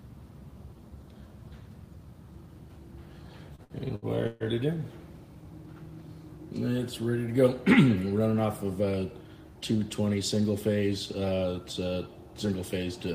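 From 3.55 to 4.43 s the sound drags and stutters through five brief stalls, each holding onto the last sound, the longest for 139 ms. These repeated stalls (stutter) come from packets arriving late, so the jitter buffer ran dry and about 0.31 s was filled in while nothing was lost.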